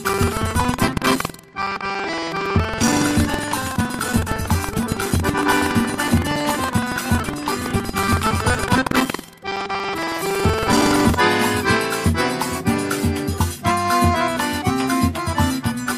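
Buffer tearing runs from 0.0 to 11.2 s: a steady rattling buzz at about 21.5 Hz that rides on the sound and disappears when it falls quiet. The write side and the playback side of the ring buffer have drifted so they cross within each period, leaving roughly a tenth of every buffer filled with audio from around 150 ms earlier. Hard joins at both edges repeat at a rate that fits a 2048-sample buffer.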